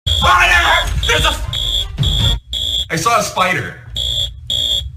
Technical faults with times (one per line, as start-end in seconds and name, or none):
none